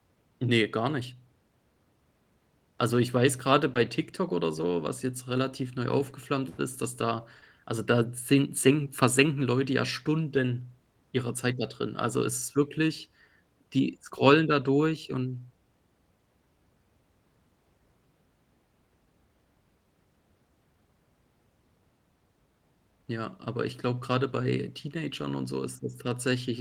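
A speech recording with two kinds of packet-loss damage. Short concealed packet loss runs from 3.73 to 3.77 s: about 20 ms never arrived and the decoder extended the preceding sound to cover it, leaving a brief smear. On a spectrogram this shows as smoothed, repeated harmonics, and on the waveform as a suspiciously regular stretch before it rejoins the real signal. A lost packet rebuilt from error correction occurs at 3.75–3.77, 14.17–14.19 and 24.41–24.43 s. Each time a single 20 ms packet was replaced by the low-bitrate copy carried in the next packet, so there is no gap, just a rougher, noisier instant, visible on a spectrogram as a thin vertical strip of grainier, less defined energy.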